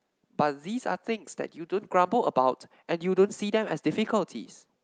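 Nothing to flag: no technical faults are audible at any point in the speech.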